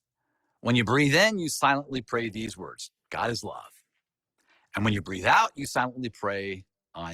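From 1.82 to 5.83 s the speech switches abruptly, with no gap, to an adaptive stream at a lower bitrate: codec artefacts rise, consistent with a step from 64 to 16 kbit/s, unlike a gradual filter. At 2.46 s a block of digital silence lasting about 10 ms cuts the sound out without a fade, leaving a sharp tick rather than a dropout.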